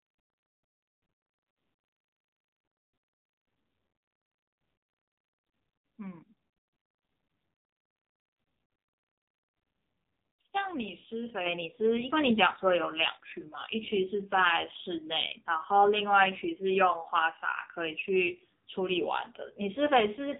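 From start to finish the speech carries the AMR narrowband mobile codec sound: nothing passes above about 3.8 kHz, and the heavy damage makes the voice buzzy and synthetic, which fits one of AMR-NB's low modes near 5.9 kbps. The codec rebuilds each 20 ms frame from a vocal-tract model fed by sparse pulses, so fine detail is lost. A spectrogram shows a flat ceiling at 3.8 kHz with smeared, blocky harmonics below it.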